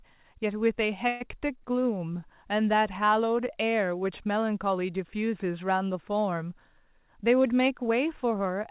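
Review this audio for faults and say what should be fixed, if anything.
At 1.08 s there's a call audio freeze: the receiver stretches the last sound into a fading buzz for about 124 ms, then resumes, with nothing lost. Likely delayed packets starving the jitter buffer.

From 6.92 to 8.46 s a jitter buffer speed-up kicks in, trimming repeated pitch-period slices, roughly a tenth of a second in total, so the speech runs about 8% fast at unchanged pitch and sounds a bit rushed.

Across the G.711 call path nothing reaches above 4 kHz, which is just that codec's band limit.

To prevent both, steady the network delay, or give the jitter buffer a bit more headroom so bursts don't drain or overfill it.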